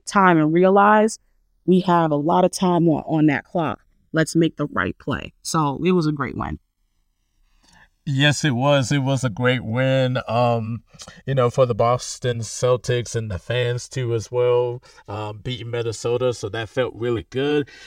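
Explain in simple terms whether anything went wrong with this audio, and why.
Something did go wrong: the channels are drifting apart. The left and right sides seem to have been recorded on two devices with slightly different clocks. Over the whole speech clip, one side slowly falls behind, by a few thousandths of a second by the end. Mixed together, the speech picks up a slow, swooshing flanging sound.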